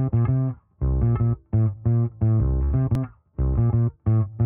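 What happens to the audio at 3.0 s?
At 2.95 s, just before the 3 s mark, there is a CD skip. The laser pickup was thrown onto another turn of the disc's spiral, probably by a knock or a surface flaw. The player mutes for only a few milliseconds and then resumes from the new track position. The result is a short tick followed by an abrupt discontinuity, because the audio carries on from a different point on the disc and not from where it left off.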